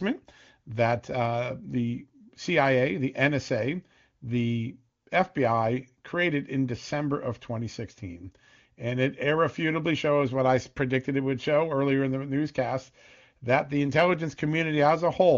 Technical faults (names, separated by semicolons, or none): none